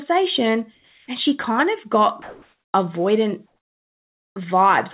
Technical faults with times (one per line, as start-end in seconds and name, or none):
0.74-1.08 comfort noise in place of the background
2.22-2.74 comfort noise in place of the background